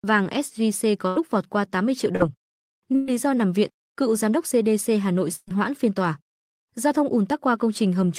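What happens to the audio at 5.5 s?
Right around there you get a burst of packet loss, running from about 5.35 to 5.50 s. Roughly 120 ms of the speech never made it through, so the receiver kept extending the last bit of sound it had for about 119 ms, fading it down into a held buzz or hiss, then about 20 ms of silence before the audio picks up again a little further along, with that chunk simply gone.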